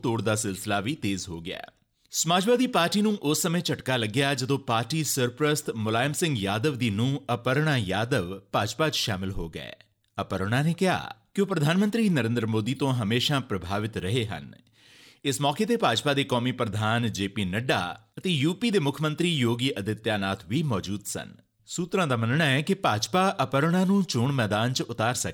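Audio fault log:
No faults were heard anywhere in this audio.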